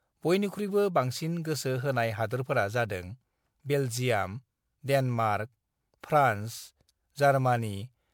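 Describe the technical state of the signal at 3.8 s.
At 3.8 s the speech carries generation loss, present across the whole clip: swirly, hollow and smeared, with blurred attacks. A spectrogram shows accumulated holes and noisy smear. The likely cause is around five passes of MP3 encoding at a rate that fits 128 kbit/s.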